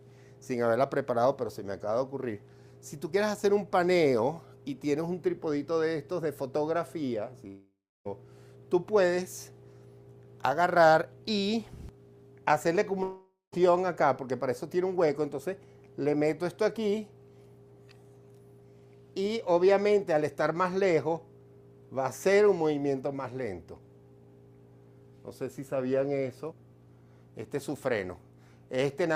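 Two gaps at 7.47 to 8.07 s and 13.03 to 13.54 s where the last sound smears into a fading buzz, then goes silent for about 0.3 s and 0.2 s before the audio resumes with that stretch missing, likely a long network dropout.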